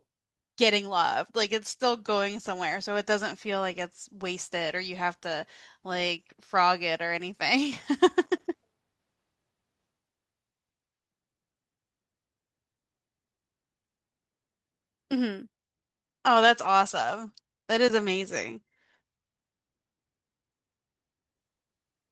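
Speech, with a call bitrate drop from 15.55 s to the end. The connection's bandwidth estimate fell, so the encoder was forced to spend far fewer bits. The quality change fits a fall from about 32 kbps to 13 kbps, held at its lowest for about 5.6 s. Coding turns coarse, and the sound becomes rough and watery. The top of the spectrum also narrows from 12 kHz to 8 kHz, which dulls sibilants and makes the audio more muffled.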